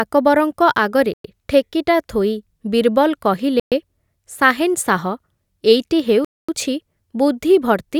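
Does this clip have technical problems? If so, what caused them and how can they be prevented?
Yes. Bluetooth stalls at 1.14–1.24 s (just before "ଠେକିଟା ଥୋଇ"), 3.60–3.72 s and 6.25–6.49 s cut the speech to silence for 108, 121 and 240 ms. Interference likely delayed packets, draining the headphones' buffer until the resent audio arrived. Keeping the phone close to the headphones, away from crowded 2.4 GHz sources, prevents this.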